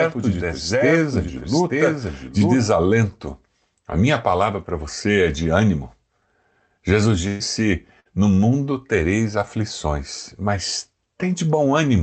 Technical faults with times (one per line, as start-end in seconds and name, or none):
0.00-2.58 doubled audio track
7.27-7.43 burst of packet loss
8.00-8.08 burst of packet loss